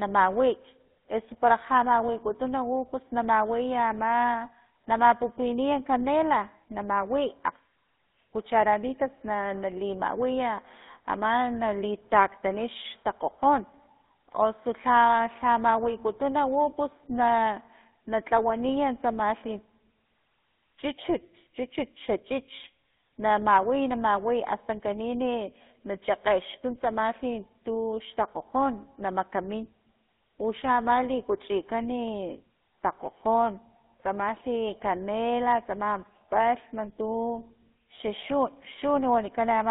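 Speech runs through the GSM full-rate codec from start to finish. The band sits between about 200 Hz and 3.7 kHz. A buzzy, gravelly roughness is plainly audible. It comes from a modelled vocal tract fed by sparse, regular pulses, which fits 13 kbps GSM.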